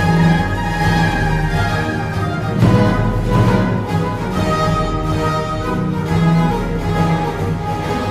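Most likely the audio was picked up a second time through a slower path, or an edit left two unaligned copies, producing a doubled audio track throughout. A full-band copy trails roughly 0.7 s behind, about 5 dB quieter, with no decay or room colour.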